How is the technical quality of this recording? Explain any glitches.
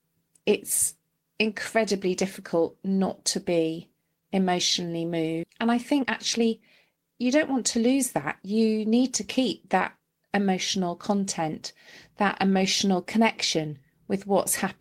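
The recording has some clear network-playback glitches, all packed into a few seconds around the middle.

Right after "not to be emotionally", at about 5.43 to 5.45 s, there's a skip ahead. Roughly a second of speech just isn't there, with nothing filling the hole. That stretch was dropped, either in transit or by the jitter buffer when it overflowed, while later audio was already queued. So playback leaps forward and the two sides butt straight together.

Then come two bursts of jitter buffer speed-up. The receiver was holding more audio than it wanted, so it trimmed out tiny pitch-period-sized slices over and over to claw back delay. From 5.49 to 6.48 s it runs at 125% speed, shaving off roughly 0.3 s, so the talking sounds rushed while the pitch stays put. From 6.89 to 9.01 s, ending just before "to keep that emotional", it's 107%, losing roughly 0.15 s, which still comes across as hurried.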